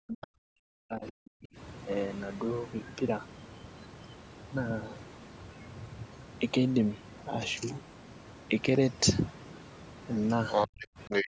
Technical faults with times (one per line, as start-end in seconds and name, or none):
0.00-11.32 overdone noise removal
0.00-1.57 speech suppressed in double talk
0.21-0.27 other side's voice leaking through
8.64-8.77 loud pop
10.50-11.28 other side's voice leaking through
10.67-11.32 speech suppressed in double talk